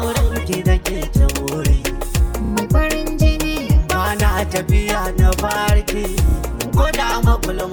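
At 2.45 s and again at 6.29 s, repeated frames occur: one 32 ms block plays twice more. Each gives a short stutter and adds 64 ms.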